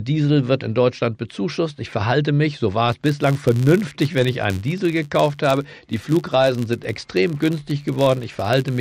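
Filter restarted on every block from 2.89 s onward: state resets each block, producing ticks at 93.8 Hz, fitting 512-sample blocks, a buzz tracking the speech level.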